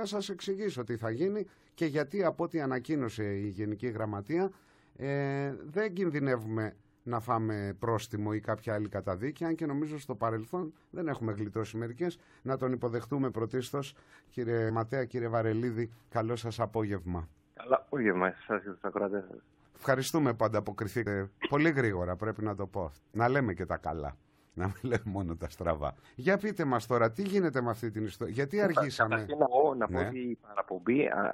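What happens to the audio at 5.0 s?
Nothing goes wrong at 5.0 s; the audio runs on intact through that moment, with no dropout, click or distortion.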